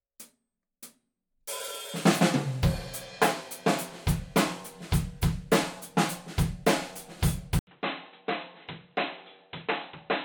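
Input switched to a poorer device, at 7.59 s to the end: after a gap of about 80 ms, the sound turns dull and boxy, with nothing above 4 kHz, drops by roughly 10 dB, and gains a new noise floor. The input likely moved to a narrower-band microphone or headset.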